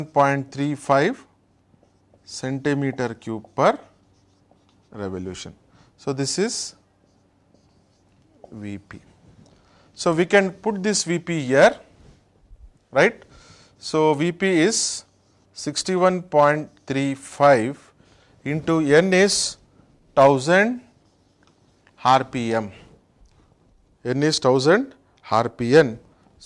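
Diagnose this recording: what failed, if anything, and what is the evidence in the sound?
Nothing here points to a failure at any stage of the chain, so there's no fault to chase in this recording.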